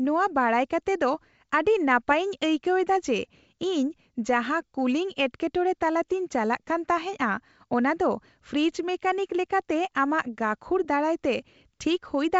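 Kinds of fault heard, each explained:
Nothing here counts as a fault; it's just speech carried over G.722 wideband telephone coding at 64 kbit/s, where the codec leaves at most a faint trace.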